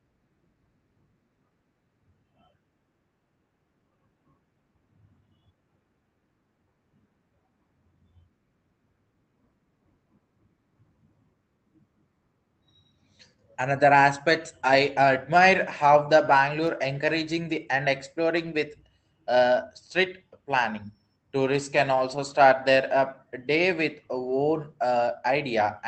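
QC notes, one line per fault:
16.27–16.29, 18.45–18.47, 21.95–21.97 and 24.27–24.33 s, lost packet rebuilt from error correction: after "I admire how the" and between "the and" and "with uh", brief rough, noisy patches with no gap, unlike packet-loss concealment's smeared fill. Each lost 20 ms packet, two at 24.27, was played from its neighbour's low-bitrate copy.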